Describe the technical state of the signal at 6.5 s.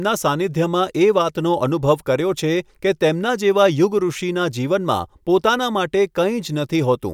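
At 6.5 s the signal is intact, with no dropout, clipping, distortion or other fault audible at that moment.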